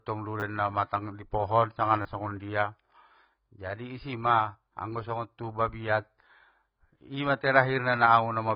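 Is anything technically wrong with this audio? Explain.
Yes, there are two problems.

Low-bitrate audio saved at a high bitrate runs through the whole clip. The speech has nothing above 5.1 kHz, a hard ceiling that leaves it dull and boxed-in, with the smeared, watery texture of heavy compression. The cause is likely a very low-bitrate first encoding later saved again as a high-bitrate MP3. The second pass only enlarges the file. It cannot bring back the highs and detail the first codec stripped out.

A repeated buffer occurs twice: at 0.40–0.42 s, just before "namatang i pohon sanga", and at 2.02–2.05 s, right after those same words. In each case fresh audio arrived late, so playback looped the last short chunk, which fits a 10 ms buffer. It sounds twice more at the first spot and three more times at the second, with a hard splice at each repeat. Because the chunk is so short, this comes across as a brief buzzy click rather than an audible stutter. 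About 20 ms and 30 ms of real audio go missing.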